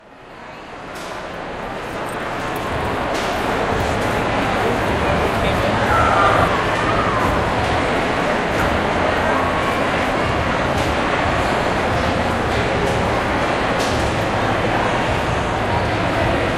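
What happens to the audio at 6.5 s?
Compressed frames skipped at 6.48 s: a run of encoded frames never reaches the output, either missing from the stream or rejected by the decoder as corrupt. The sound jumps forward by roughly half a second, which fits about five frames of around 93 ms each. The material that should have filled that gap is simply absent.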